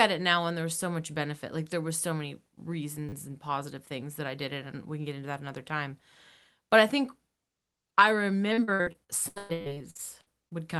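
At 3.09 to 3.13 s there is a repeated buffer. New audio arrived late, so the device replayed its last piece. The same tiny slice sounds four extra times. With pieces this short, it is heard as a click or brief buzz, which fits a 10 ms buffer.

From 8.53 to 10.52 s there is repeated packet loss, giving robotic sound. Packets went missing again and again. Each hole is patched by stretching the last sound. About 680 ms is missing, and roughly a third of the stretch is concealed. The longest gap is 114 ms. It sounds choppy, with pieces missing.

At 9.61 to 9.65 s, inside that stretch, a second repeated buffer occurs. Again one slice that fits a 10 ms buffer plays four extra times. This adds a click or short buzz on top of the choppy sound. All of this passes through an Opus call path with audio up to 12 kHz.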